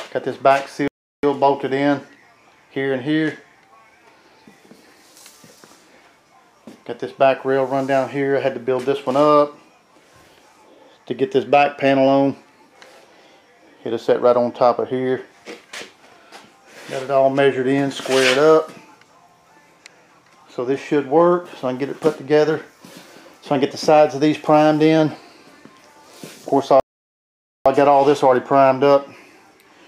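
The player likely ran dry of data or had its thread blocked, producing a playback stall twice: the audio cuts to silence from 0.88 to 1.23 s (0.36 s) and again from 26.80 to 27.66 s (0.86 s), then resumes mid-flow.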